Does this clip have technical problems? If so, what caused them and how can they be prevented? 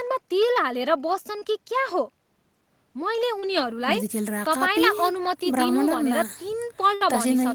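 Yes. Short concealed packet loss occurs twice: about 20 ms of speech at 1.39 to 1.43 s and about 40 ms at 3.39 to 3.45 s failed to arrive in time. The receiver extended the preceding sound over each hole and then blended back, leaving a brief smear or wobble.

A burst of packet loss at 6.95 to 7.03 s lost about 60 ms of consecutive audio. Concealment continued the last sound while fading it, so a held buzz or fading hiss replaces that stretch before speech resumes further on.

A steadier or wired network connection, traffic prioritisation for the call, forward error correction, and a slightly deeper jitter buffer would keep packets arriving in time.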